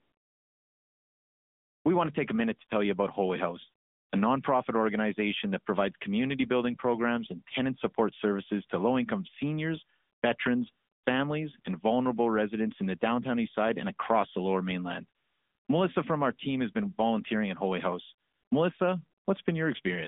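The speech has passed through an AMR narrowband mobile codec, whose vocal-tract model and sparse pulses give a plainly buzzy, synthetic edge, consistent with a mid-rate mode around 10.2 kbps. The phone-line band runs roughly 200 Hz to 3.6 kHz, with nothing above 3.7 kHz.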